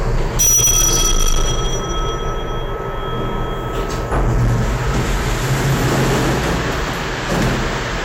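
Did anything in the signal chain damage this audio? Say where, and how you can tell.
Yes. From start to finish every loud moment carries a harsh, buzzy fuzz, and the peaks sound squared off rather than rounded. That is hard clipping, and it runs the whole length of the clip. The signal was driven about 17 dB beyond what the converter or sample-format stage could pass. Around a tenth of the samples were cut flat at that stage's limit, and those flattened tops add a spray of high harmonics across all of the louder sound.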